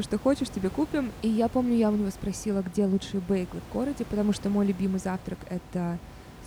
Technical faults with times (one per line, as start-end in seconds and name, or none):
none